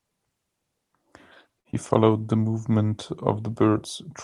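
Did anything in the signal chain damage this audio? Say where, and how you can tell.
Yes. At 1.59 to 1.67 s, the network and jitter buffer stage produced a short stall from a late packet. The buffer ran empty, and the receiver stretched the last sound by 56 ms until the data arrived. The speech holds too long with a slight buzz or dip, then resumes with nothing lost.

Just after, at 1.71 to 1.75 s, there is a short concealed packet loss. About 20 ms of audio never reached the decoder, so concealment extended the preceding sound and blended back into the real signal. It is heard as a brief smear or wobble.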